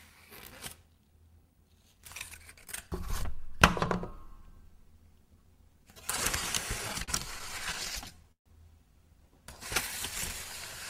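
A short clip of general sounds that runs cleanly until about 6.78 s, then breaks into repeated stalls (stutter) through to about 8.47 s. Over that stretch the playback hangs fifteen times, holding and stretching the last bit of sound each time. The longest hold is about 138 ms, and together the holds add roughly 0.3 s, about 18% of that span. Nothing actually drops out. The jitter buffer kept running dry because packets arrived late or too slowly, so the receiver padded each wait until data caught up, which is why that section drags and stutters.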